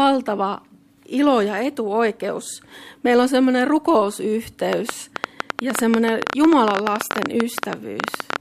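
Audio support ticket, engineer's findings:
Train of clicks, 4.73 to 8.37 s. About forty near-identical pulses at roughly 11.8 per second, unevenly spaced, peaking around 20 dB above the programme. Ticking audible over sound and through gaps. Likely cause: external interference from nearby equipment or a faulty connection or power supply injecting repeated pulses into the signal path.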